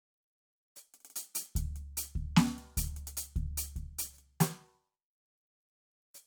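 Nothing in this bit of music stands out as a technical fault; there's just the music itself, with no glitches or slips along the way.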